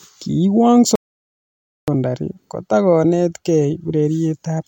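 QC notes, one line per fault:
0.96 to 1.88 s, audio dropout to silence: the speech cuts off abruptly and comes back just as suddenly, leaving a hole of about 0.92 s that's dead silence, not even room tone underneath. That total absence is the tell: the input most likely went missing for a moment (a loose connection, a link hiccup or an accidental mute) while the recorder kept writing silence, so whatever was said in that stretch simply isn't there.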